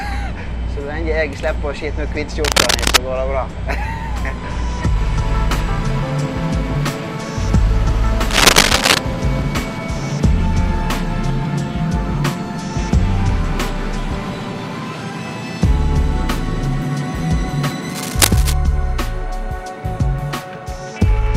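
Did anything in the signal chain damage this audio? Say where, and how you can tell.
Yes. Three bursts of cable scratch noise appear at 2.44–2.97 s, 8.30–8.98 s and 17.88–18.54 s. Each is dense, irregular scratching lasting about half a second or more, the first two about 5 dB above the signal and the last at roughly its level. The likely cause is in the analogue wiring: a worn cable or connector being moved, so its contact resistance changes rapidly. Unlike digital clicks or dropouts, these are ragged rustling textures, not single sharp ticks or gaps.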